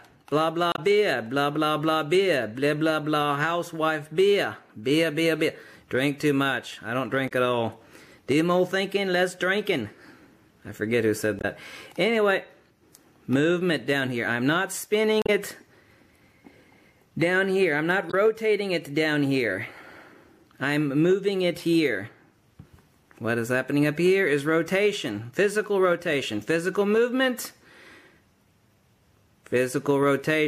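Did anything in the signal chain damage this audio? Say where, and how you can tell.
Yes. The damage happens at the codec stage and is damaged data in a compressed stream. There are five short bursts, at 0.72 to 0.79 s, 7.28 to 7.32 s, 11.39 to 11.45 s, 15.22 to 15.29 s and 18.10 to 18.14 s. Each lasts 40 to 80 ms and is a brief glitch: a chirp, squawk, click or short hole. The decoder hits corrupted bytes and misreads those frames. It loses sync until it finds the next frame header. At 15.22 s the recovery also adds about 8 ms of extra time.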